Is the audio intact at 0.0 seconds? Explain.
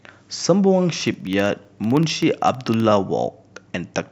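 Yes, the speech is intact at 0.0 seconds, with no audible fault at that moment.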